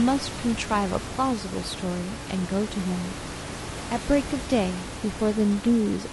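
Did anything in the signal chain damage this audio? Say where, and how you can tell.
Yes: low-delay AAC compression at the codec stage, throughout the clip. The speech sounds rough and grainy, with noise filling the gaps between harmonics. This is likely AAC-ELD, whose short frames resolve pitch poorly, and the damage fits a bitrate around 32 kbps. The room noise, about 10 dB below the speech, belongs to the recording.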